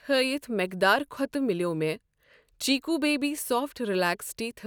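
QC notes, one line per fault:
No faults found in the speech. Nothing in the audio needs flagging.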